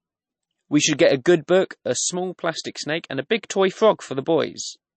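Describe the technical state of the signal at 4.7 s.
At 4.7 s the speech sounds watery and swirly, with chirpy, metallic s sounds and nothing above 8.3 kHz. This runs through the whole clip. The cause is likely MP3 compression at a low bitrate, which cuts the treble and switches weak frequency lines on and off between frames.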